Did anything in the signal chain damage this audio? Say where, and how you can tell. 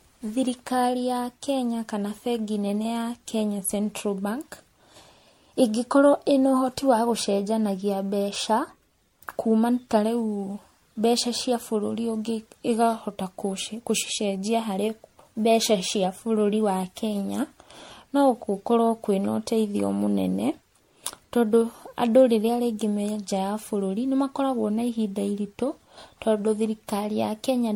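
Yes, at the codec stage: generation loss throughout. The speech sounds swirly and hollow, with blurred attacks and nothing above 16.6 kHz. It likely went through MP3 around seven times.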